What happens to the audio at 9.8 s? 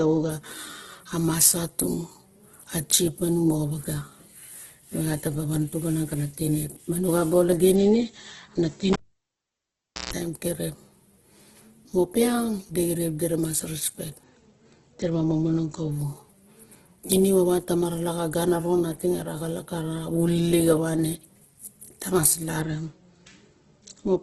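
At 9.8 s the sound falls inside a cable pulled and plugged in, running from 8.93 to 10.13 s. A live lead is yanked out and reinserted. A pop opens a near-silent gap of about 1.15 s, and a roughly 0.15 s burst of 60 Hz mains buzz sounds as the tip makes contact before a second pop. On a waveform this shows as two sharp spikes framing a flat stretch with a brief thick hum band, which appears on a spectrogram as 60 Hz harmonic lines.

Underneath, the speech is grainy and rough, with nothing above 12.3 kHz. A spectrogram shows a hard ceiling at 12.3 kHz and noise-filled, smeared bands below it, likely from heavy Opus compression at 12 kbps in its CELT music mode.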